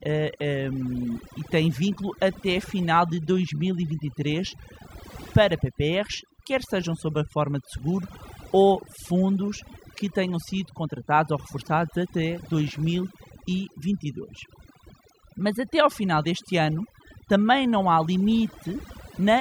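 Across the whole recording, overdone noise removal drops the background, breaking it up into twinkling specks. Unlike a noise gate, which mutes everything between phrases, it cuts individual frequency bands, taking quiet parts of the voice too.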